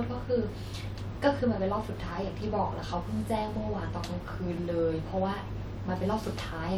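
No technical faults can be heard anywhere in the speech recording: the signal holds steady throughout, with nothing interrupting, distorting or altering it.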